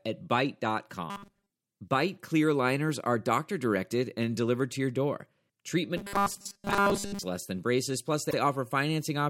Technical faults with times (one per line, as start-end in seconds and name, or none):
1.10-1.51 robotic sound from repeated short buffers
5.97-7.23 robotic sound from repeated short buffers
8.30-8.35 repeated frames